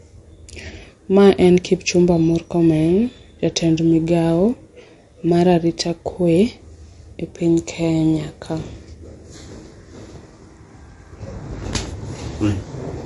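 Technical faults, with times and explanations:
Throughout, MP3 compression: nothing above 11.3 kHz, with plainly audible watery, swirling smear on the speech, likely from an encoder starved of bits (consistent with roughly 50 kbps); the flickering, zeroed weak frequency lines set it apart from a clean low-pass filter.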